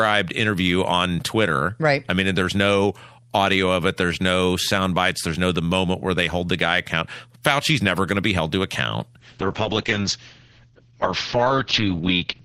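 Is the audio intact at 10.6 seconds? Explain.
No. A call bitrate drop begins at 9.22 s, right after "be held to account", and lasts to the end. The encoder falls from 48 to 7 kbps and cuts bandwidth from 20 kHz to 6 kHz. The speech turns coarse, watery and muffled.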